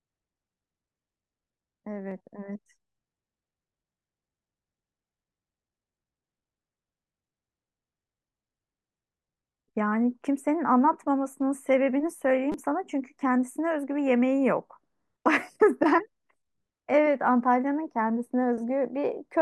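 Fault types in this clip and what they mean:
repeated buffer: Fresh audio reached the playback device late, so it replayed its last short block, which fits a 5 ms buffer. At 2.11 s one repeat gives a click; at 12.52 s four repeats make a brief buzz, losing roughly 20 ms.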